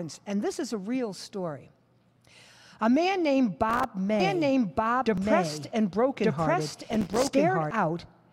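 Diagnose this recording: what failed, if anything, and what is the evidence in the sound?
Processor overload crackle sits at the driver or buffer stage. A gritty burst runs from 3.70 to 3.84 s, and a longer one from 6.83 to 7.29 s. Each is a run of tiny silent gaps with hard edges. This fits buffers of about 3 ms missing their deadlines, roughly ten in a row, then around thirty.

A doubled audio track appears from 4.20 to 7.71 s. A full-band copy trails the sound by about a second, at about the same level. It has no decay or room colour, and it starts and stops abruptly. The likely cause is a second, slower capture path mixed in.

Overlapping chunks show at 5.18 s as a short click or stutter. About 7 ms of audio plays twice at a join. This points to chunked processing or transfer, with 3-second chunks, where the next chunk starts before the previous one has finished.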